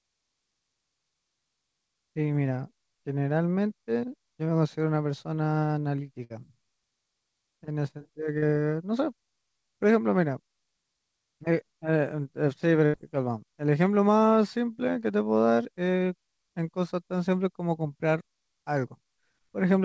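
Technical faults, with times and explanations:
6.24–6.32 s, burst of packet loss: sound holds and fades for about 60 ms, then jumps ahead; lost packets were bridged by extending the last audio.
8.38–8.44 s, short concealed packet loss: a brief 40 ms smear or wobble, where the receiver patched missing packets by continuing the preceding sound.
12.86–12.95 s, burst of packet loss: a longer held, fading stretch of about 76 ms before audio resumes later, with the lost section gone.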